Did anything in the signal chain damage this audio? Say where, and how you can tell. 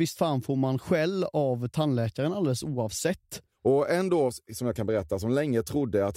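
No, nothing in this speech recording points to damage from any stage of the signal chain. There is no audible event that marks a point where the signal went wrong.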